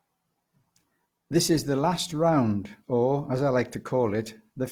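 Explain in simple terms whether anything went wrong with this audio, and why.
Throughout the speech, the sound is grainy and rough, as if fine noise is woven into it, yet it stays bright. That points to likely Opus compression. Unlike MP3 damage, there is little swirling or watery warble, and it is not muffled.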